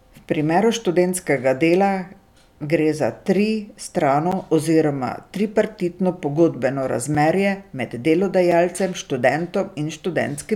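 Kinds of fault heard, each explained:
Block of digital silence: the speech cuts straight to zeros and back with no fade, leaving short ticks at 4.32, 7.15 and 8.52 s, each 3.6 to 10 ms.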